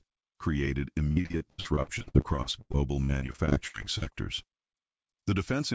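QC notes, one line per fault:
1.12–4.13 s, repeated packet loss (robotic sound): choppy stutter as dozens of dropouts up to 86 ms are each patched by repeating the preceding sound.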